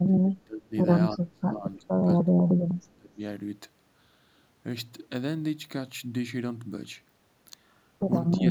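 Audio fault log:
0.06–0.75 s, 1.16–2.08 s, 2.25–3.18 s and 8.37–8.49 s: speech suppressed in double talk. The speech sinks sharply in each stretch, by roughly 25 to 30 dB in the first three and only about 15 dB in the brief last one, then recovers. The likely cause is an echo canceller that was unable to separate this talker from the far side's loudspeaker echo while both spoke at once, and turned everything down.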